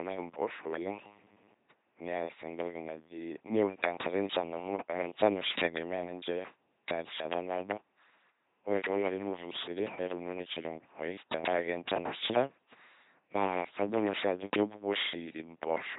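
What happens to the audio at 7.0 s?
At 7.0 s the speech carries the LPC-10 vocoder damage present throughout the clip: each frame is rebuilt as either a buzzy pulse train or hiss through a simple tract filter, consistent with a 2.4 kbit/s vocoder. The result is a mechanical robot voice, and a spectrogram shows rigid harmonic stripes or flat noise with nothing above 3.9 kHz.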